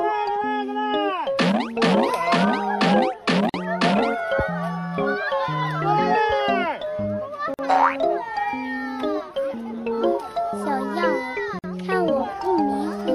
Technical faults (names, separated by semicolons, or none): gap at a join of encoded pieces